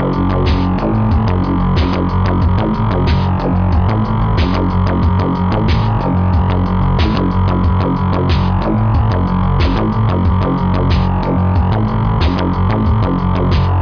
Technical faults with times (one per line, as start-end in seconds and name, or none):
none